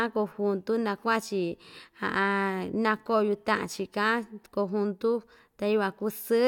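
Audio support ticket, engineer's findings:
No faults found on listening; the speech runs without dropouts, clicks, distortion or level problems that would point to a failing component.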